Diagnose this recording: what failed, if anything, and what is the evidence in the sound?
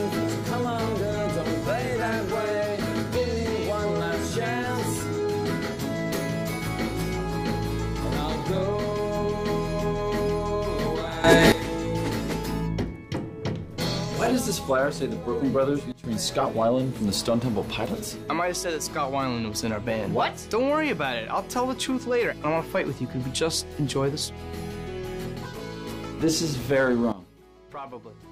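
The level steps abruptly three times, and the background noise steps with it each time. At 11.24 s everything jumps up by about 12 dB until 11.52 s. From 15.92 to 16.04 s it drops by about 15 dB, and from 27.12 s to the end it drops by about 15 dB again. These are sudden gain jumps, likely a digital gain change in the processing chain applied from one sample to the next with no ramp.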